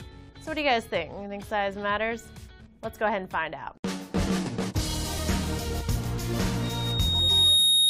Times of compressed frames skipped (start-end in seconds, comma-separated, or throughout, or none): 5.17